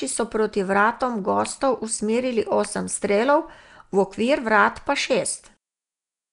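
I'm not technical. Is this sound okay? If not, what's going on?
No. The speech was likely squeezed through Nellymoser compression, an old Flash codec, so it sounds rough, hissy and underwater throughout, with nothing above 10.6 kHz.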